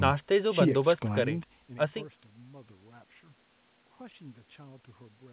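Nothing here counts as a fault: the speech sits within the narrow band of a G.711 phone call, with nothing above 4 kHz, and the gentle fader-like rises and dips in level are just ordinary handling.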